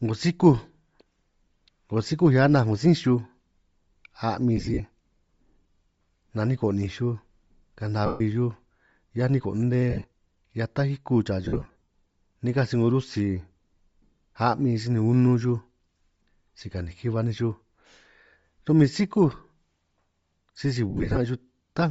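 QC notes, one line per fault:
throughout: Bluetooth LC3 compression. The speech has a plainly audible breathy, grainy edge, and the upper range sounds like hiss rather than detail. This is likely the LC3 codec of Bluetooth LE Audio running at a low rate, which fits about 32 kbps with short 7.5 ms frames. At that rate the encoder discards much of the upper spectrum, and the decoder fills those empty bands with noise, producing the rough, airy texture.
4.57–4.80 s, 8.06–8.21 s, 9.90–10.04 s, 11.45–11.87 s and 20.90–21.18 s: lost LE Audio frames. The speech briefly dissolves into a noisy, smeared blur and in places sinks toward silence. The 8.06 s event is one solid gap of about 140 ms. The others are scattered dropouts. The worst is at 11.45 s, where about 315 ms is lost across 450 ms, with runs of around 50 ms. The decoder conceals each gap by replaying the last good spectrum with randomised signs, which turns it to noise, then fades it.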